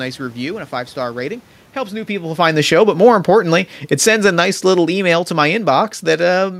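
From 2.27 to 3.32 s and again from 3.84 to 6.55 s, automatic gain falling pulls the level down by about 4 dB, then about 7 dB. The room noise sinks along with the speech, which sets it apart from the talker's movement around 2 s.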